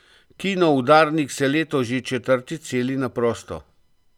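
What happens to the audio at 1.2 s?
Nothing goes wrong at 1.2 s: the speech carries on cleanly through that moment with no audible fault.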